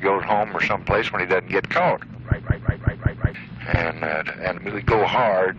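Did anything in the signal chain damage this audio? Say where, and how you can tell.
Yes. At the driver or buffer stage, the system hung from 2.42 to 3.34 s while the audio hardware kept replaying its ring buffer. This is a system hang loop: one segment of about 186 ms, which fits an 8192-sample buffer, repeats exactly five times at about 5.4 Hz. Because the piece is that long, it comes across as a mechanical stutter rather than a buzz, and roughly a second of audio never plays.

At 4.56 s, damaged data in the compressed stream reaches the codec stage. Corrupted bytes make the decoder misread or reject the frame there, and it loses sync while it looks for the next valid header. The result is a brief glitch lasting under 20 ms. It comes from misdecoded frame data, which is why it points to the stored or streamed file rather than the playback hardware.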